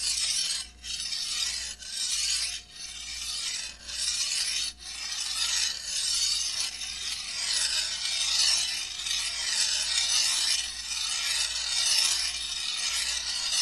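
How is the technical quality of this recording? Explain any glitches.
Nothing stood out on listening to this recording; there were no audible glitches to point to.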